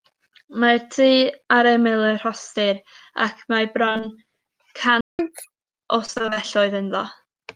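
Speech in the clip suffers repeated packet loss (robotic sound) twice. From 3.85 to 4.14 s there are five short gaps, the longest about 23 ms, and roughly half the stretch is patched by repeating the preceding sound. From 6.06 to 6.38 s there are eight gaps, the longest about 24 ms, again half concealed. Both stretches sound choppy, and a spectrogram shows harmonics frozen into flat, repeated bands with brief breaks between them. At 5.01 s a playback stall silences the output for 181 ms, until 5.19 s, most likely because the player's buffer ran dry or its thread was blocked. The waveform flattens to a straight line there, and the spectrogram shows a blank vertical strip. Immediately afterwards comes catch-up at higher speed: from 5.19 to 5.55 s the backlog plays at 1.5 times normal speed, raising pitch by roughly seven semitones before settling back. On a spectrogram the harmonics in that span sit noticeably higher and more widely spaced, and syllables appear compressed in time.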